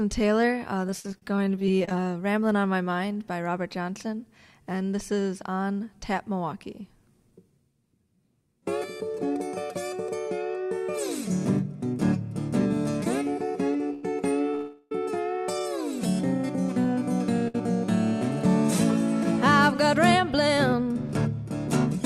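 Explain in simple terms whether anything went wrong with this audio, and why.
Between 0.87 and 2.04 s there is repeated packet loss, which gives a robotic, choppy sound. Fifteen short holes, the longest 41 ms, were each patched by repeating the last bit of sound. About a fifth of that stretch is filler, and roughly 181 ms of real audio is gone.

At 13.93 s and again at 17.48 s there is a short stall from a late packet. Each time a packet arrived late, so the last sound was held for about 98 ms and then about 65 ms before playback resumed where it had stopped. Nothing is lost, but the sound briefly drags.

From 14.55 to 14.92 s there is a call audio freeze. For 358 ms the sound hangs as a fading buzz or hiss, never dropping to silence, and then carries on without skipping anything. The likely cause is packets held up in transit, which emptied the receiver's buffer.

From 16.84 to 20.73 s there is a jitter buffer speed-up. 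To cut extra delay, the receiver trimmed many tiny slices, about 40 ms in total. Playback runs at 101% speed and the pitch stays the same, so the change is slight.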